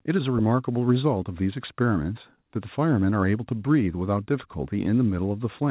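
Nothing stood out on listening to this speech, which carries the narrow, telephone-like band of a call path with nothing above about 4 kHz, as expected for a G.711 mu-law call.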